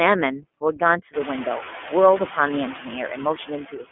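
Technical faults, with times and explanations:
Throughout: noise suppressor artifacts. The suppressor estimates the steady background band by band and pulls it down every frame, but only by about 3 dB here. The room noise, which climbs by about 21 dB around the one-second mark, still sits only about 15 dB under the speech. So the residue keeps shifting as the gain tracks each frame. It dips in gaps and swells under speech.
Throughout: iLBC codec. The line carries only roughly 200 Hz to 3.4 kHz, so everything above 3.4 kHz is gone and the sound is boxed-in, telephone-like. The coding damage is plainly audible. Each 30 ms frame's excitation is coded on its own, which fits the 13.33 kbps iLBC mode. That gives a rough, buzzy, slightly synthetic grain, made worse because the codec also has to render the raised background noise, which it handles poorly.
3.36–3.92 s: speech cut by the noise suppressor. 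In the final stretch the suppressor judged parts of the speech to be background and applied its noise gain to them, with dips reaching about 18 dB. Around a fifth of a second of material is affected in total. Those pieces sound swallowed and faint, as if the ends of the sound were pulled back into the noise floor rather than fading naturally.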